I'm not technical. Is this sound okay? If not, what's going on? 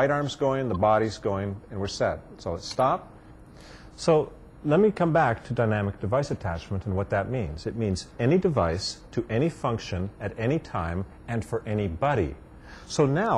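No. At 0.74 to 0.76 s there's a brief blip from damaged data in a compressed stream. Some stored data was corrupted, so the player briefly stumbled.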